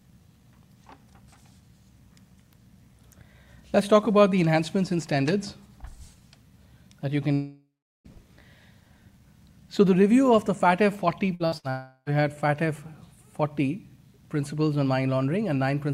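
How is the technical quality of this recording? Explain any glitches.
The recording has two kinds of network glitch: a pair of long gaps and a quick run of short stutters.

Long network dropout, 7.33 to 8.08 s and 11.70 to 12.09 s: the last sound is stretched into a fading buzz or hiss and then goes silent, about 380 ms the first time and 50 ms the second. The audio resumes with roughly 720 ms and 360 ms missing. This is likely a break in the incoming stream, which the receiver covered by continuing the last sound.

Burst of packet loss, at 11.35, 11.46 and 11.58 s, leading straight into the second dropout: three brief stutters, each a 50 to 60 ms held, fading continuation of the preceding sound. Packets were lost or arrived too late, so the receiver extended the last audio and skipped about 60 ms each time.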